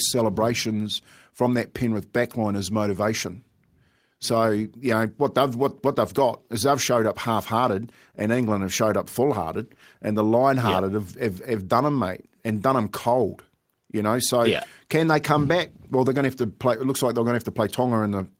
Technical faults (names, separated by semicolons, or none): none